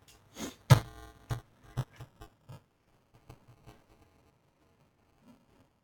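Buffer tearing runs throughout the speech: a robotic buzz at 375 Hz, which fits a 128-sample buffer, rides on the signal. Writer and reader have slipped, so about a fifth of each period replays audio several milliseconds old, hard-joined on both sides.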